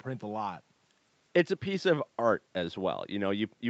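No faults are audible in this speech; the band tops out around 8 kHz, as expected from the call codec and microphone processing it went through.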